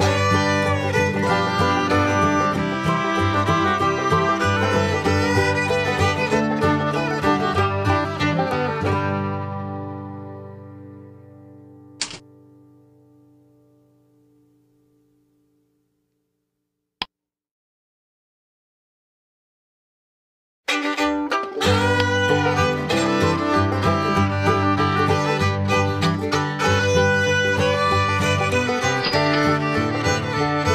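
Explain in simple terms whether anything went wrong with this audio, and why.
Nothing went wrong here; a full listen turns up no audible fault at any point.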